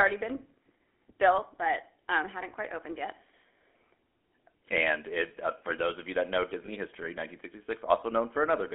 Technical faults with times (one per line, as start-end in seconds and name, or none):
0.00-8.74 GSM full-rate codec
6.66-6.69 lost GSM frames